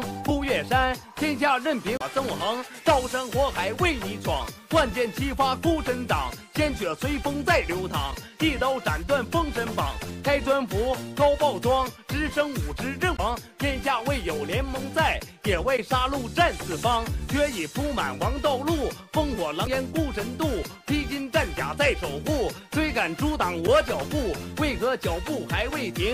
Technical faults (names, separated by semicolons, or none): damaged data in a compressed stream